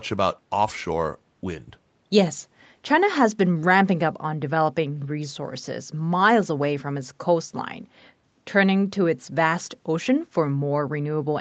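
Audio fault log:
No faults found; the speech shows only the normal band-limiting of the call microphone processing and WebRTC call path, with nothing above 8 kHz.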